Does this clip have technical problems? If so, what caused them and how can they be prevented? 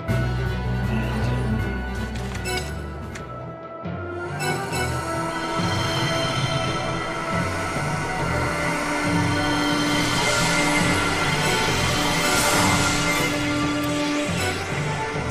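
No technical problems are audible.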